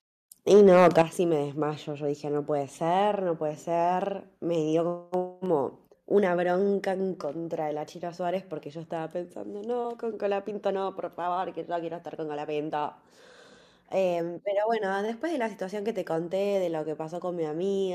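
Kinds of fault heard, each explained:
Microphone overload, 0.52 to 1.02 s: the loudest syllables turn harsh and crackly, with their peaks flattened on roughly one sample in twenty. The likely cause is input gain set about 6 dB too high, driving the converter past full scale and shearing off waveform tops.
Microphone volume stepped down, at 1.02 s: voice and background fall together by about 9 dB in a single jump, straight after the distorted stretch. This points to call software reacting to the clipping by cutting the device's input volume in one step.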